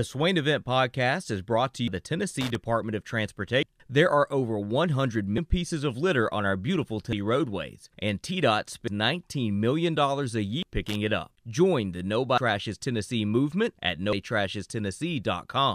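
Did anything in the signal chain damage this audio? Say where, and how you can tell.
Yes. Audio missing between chunks at 1.88, 3.63, 5.38, 7.13, 8.88, 10.63, 12.38 and 14.13 s: the speech skips forward every 1.75 s, with no gap of silence. That pattern fits 2 s buffers, likely dropping roughly 300 ms at each handover in the driver or buffer stage.

Loose connector crackle from 2.41 to 2.55 s and from 10.86 to 10.95 s: short, irregular bursts of scratchy crackle. This points to the analogue wiring, where a faulty contact opens and closes rapidly and chops the signal while it moves.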